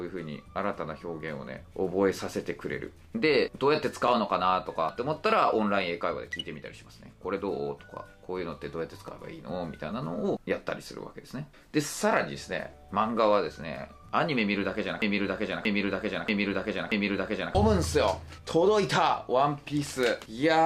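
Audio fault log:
9.08 s, 14.09 s and 19.09 s, overlapping chunks: at each of these points a brief click or stutter breaks the flow, spaced almost exactly 5 s apart. The audio was handled in 5 s blocks, and each new block starts about 6.5 ms before the previous one finished, so that sliver plays twice at every join. The regular spacing is what identifies it as a chunk boundary rather than a random glitch.
15.02–17.55 s, broken-record loop: a fragment about 632 ms long repeats back to back, playing four times in a row, like a needle stuck in one groove. The repetitions are exact, and whatever audio belonged in those two and a half seconds is simply missing. This is likely a stall in the player, encoder or stream, which kept putting out the last piece it held until fresh data arrived.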